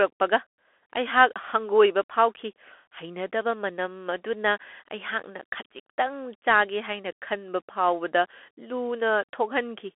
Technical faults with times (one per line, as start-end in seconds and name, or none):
0.00-9.98 Bluetooth CVSD headset codec